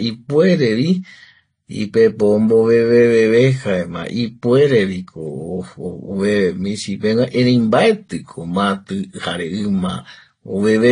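Across the whole recording the speech sounds dull, with nothing above about 10.1 kHz and a mix of different codec artefacts heard together that never settles into one consistent texture. The likely cause is transcoding between lossy codecs. The sound points to a low-rate AAC-LC pass of around 32 kbit/s followed by Vorbis at a similar rate. The second encoder wasted bits on the first one's artefacts, added its own, and kept the lowest cut-off in the chain.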